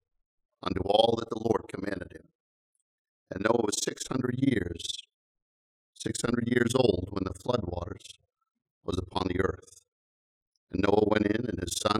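Throughout the clip, the audio has overlap-add ripple. It was split into windowed frames and rejoined with an overlap whose windows don't add up to a steady gain, so every frame boundary leaves a dip in level. The swing is deep, about 60 dB, and repeats around 20 times a second. The sound pulses almost to silence and back at that rate, giving a harsh, chopped, robotic flutter over the whole recording.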